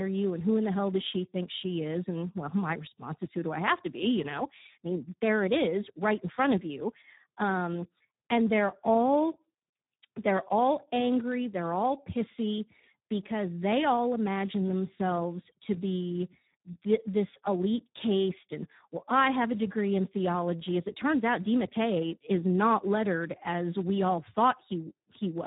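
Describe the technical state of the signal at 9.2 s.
At 9.2 s, as throughout, heavy Speex codec damage: the thin excitation of this CELP coder leaves the speech hoarse and buzzy, not merely muffled, with nothing above 3.8 kHz, which fits about 8 kbps.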